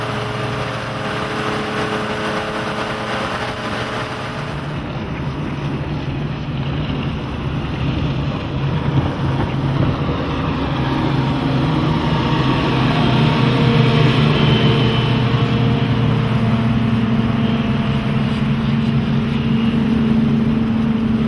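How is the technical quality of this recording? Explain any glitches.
The recording's technical quality is sound, with no glitches to explain.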